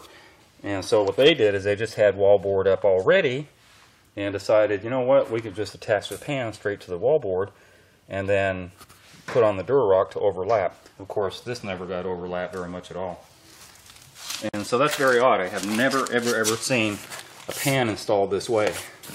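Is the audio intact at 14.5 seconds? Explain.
No. A gap at a join of encoded pieces runs from 14.49 to 14.54 s, about 49 ms. Separately encoded segments were joined untrimmed, leaving encoder start delay and final-frame padding in place. The sound breaks into codec-smeared silence, then resumes where it stopped.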